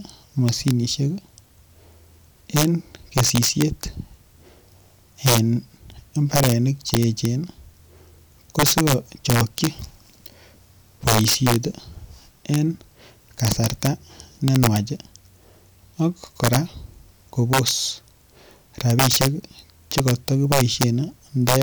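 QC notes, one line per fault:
Throughout: integer overflow. The speech is driven about 8 dB past full scale, and instead of being held at the limit, the loudest peaks wrap around to the opposite extreme, roughly half a percent of samples. Each wrap is an instant full-range jump, so loud syllables carry harsh, violent cracks far sharper than clipping. On a waveform, peaks snap from top to bottom rail rather than flattening; a spectrogram shows thin broadband vertical streaks at those moments.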